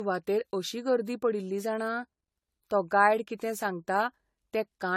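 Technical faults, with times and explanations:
Throughout, generation loss: the speech sounds swirly, hollow and smeared, with blurred consonant attacks, likely from around seven rounds of AAC-LC-style encoding near 64 kbit/s, each adding fresh quantisation noise. A spectrogram shows nothing above 16.5 kHz and patchy, hole-ridden upper bands.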